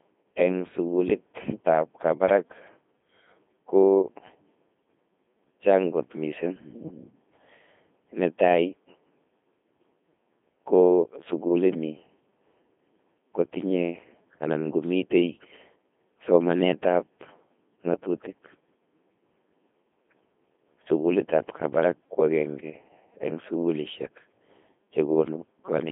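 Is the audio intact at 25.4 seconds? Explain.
No. At 25.4 s the speech is still coming through the Codec 2 vocoder, as it is throughout the clip. Only pitch, voicing, energy and a spectral envelope survive, rebuilt from sine waves. It sounds robotic and buzzy, band-limited to 200 Hz to 3.5 kHz, consistent with a 2.4 kbit/s mode.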